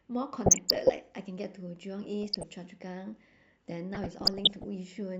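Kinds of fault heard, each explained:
DAB burbling: short noise blips over the speech in three bursts, as weak reception lets bit errors corrupt samples in individual sub-bands.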